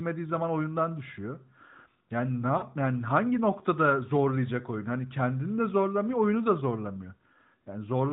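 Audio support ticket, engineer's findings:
Lost AMR speech frames, 2.58–2.64 s, before "yani hangi noktada zorlayacak": 40 ms smeared fade, decoder reusing last pitch/filter, gain falling; decaying waveform, blurred spectrogram harmonics.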